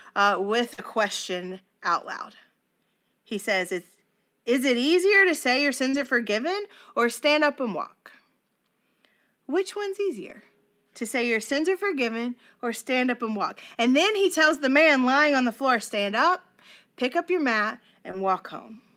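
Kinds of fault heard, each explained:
Short concealed packet loss: at 0.73, 5.89 and 18.11 s, after "uh with" first, about 40 ms went missing (20 ms at 18.11 s) and the receiver continued the last sound, leaving brief smears.
Lost packet rebuilt from error correction: at 0.77, 5.93–6.07, 10.29–10.35, 11.45–11.59, 14.45–14.55 and 18.13 s, low-bitrate copies replaced lost audio, sounding rougher and noisier without gaps.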